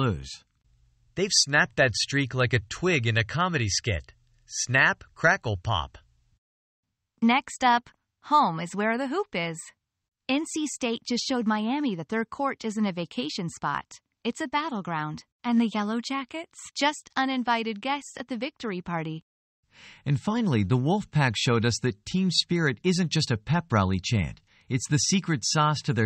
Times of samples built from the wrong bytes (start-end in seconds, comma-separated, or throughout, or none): none